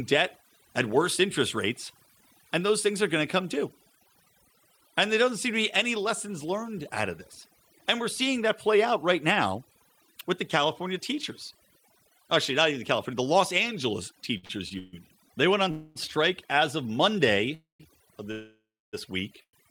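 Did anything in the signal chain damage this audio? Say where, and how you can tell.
Yes. Overdone noise removal in call processing runs throughout: the background drops and breaks up into twinkling specks, with quieter bands of the speech switched off along with it.

Repeated stalls (stutter) from 14.37 to 14.95 s: four gaps, the longest 140 ms, each padded by stretching the last sound. The jitter buffer kept running dry, but nothing was lost.

Call audio freezes at 15.71 s (between "went on" and "strike as of"), 17.54, 18.32 (about 0.6 s) and 19.43 s, with held sound fading, down to silence in the last three. The likely cause is network delay draining the jitter buffer.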